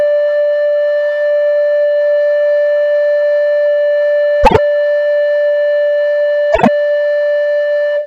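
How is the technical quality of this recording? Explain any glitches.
The music has two brief playback glitches of the same kind.

Frames out of order, at 4.43 to 4.59 s and 6.52 to 6.68 s: in each, two adjacent runs of about 48 ms, which fits two frames per run, were decoded in swapped order, so the stretch plays halves exchanged. It sounds like a garbled flutter, and no time is lost.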